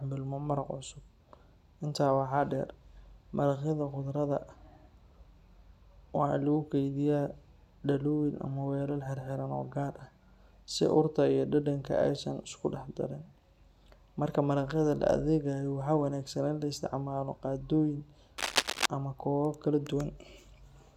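A worn cable, connector or control was likely disturbed near the end of the speech, making its contact resistance jump around erratically. Between 18.38 and 18.86 s that produces cable scratch noise: a dense, irregular burst of scratching and rustling laid over the speech for about half a second, roughly as loud as the speech itself, so it competes with it directly rather than sitting quietly underneath.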